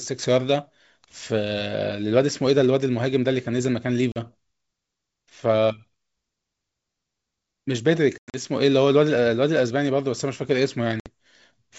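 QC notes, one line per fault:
4.12–4.19 s, 8.18–8.40 s and 11.00–11.10 s: packet loss on an ADPCM call. Each spot has sharp-edged silent gaps. About 40 ms drops out first, then 140 ms spread over 160 ms with a 100 ms longest run, then 60 ms. These fit roughly two, seven and three lost packets. The decoder's predictor and step size lose track of the sender's. So the speech comes back with brief, slight distortion, then settles. Outside the gaps the 64 kbit/s G.722 wideband sound stays clear.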